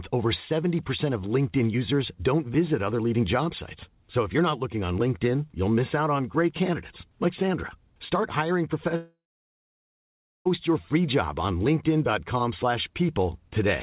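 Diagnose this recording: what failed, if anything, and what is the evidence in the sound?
The network stage is the likely culprit, with a long network dropout starting at 8.96 s. The receiver appears to have run out of packets for about 1.5 s, and the concealment smeared the last sound into a short fading buzz before giving way to roughly 1.3 s of near silence. The sound returns at 10.47 s on "your free job on", with the intervening stretch simply missing. The narrowband G.711 call path, with nothing above 4 kHz, carries it.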